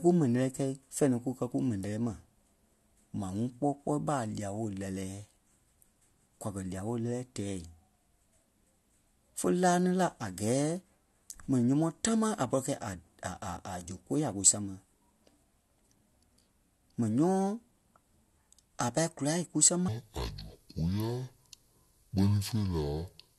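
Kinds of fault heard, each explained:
Section at the wrong speed: playback likely ran at about 0.56 times the recorded rate from 19.88 s, after "a pâi kùla kúsama", so speech drops about ten semitones and drags.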